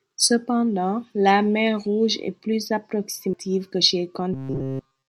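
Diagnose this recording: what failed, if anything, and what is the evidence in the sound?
At 3.33 s a short tick and a mute of only a few milliseconds are followed by the speech resuming from a different point. This is a CD skip at the playback stage: the pickup jumped to another track of the spiral and continued from there.

From 4.33 s to the end at 5.08 s, the speech becomes a rigid metallic buzz at 133 Hz that only loosely follows the speech. This is robotic sound from repeated short buffers, likely at the driver or buffer stage. Repeating roughly 7.5 ms blocks throughout that span replaces the real audio and imposes a fixed-rate buzz.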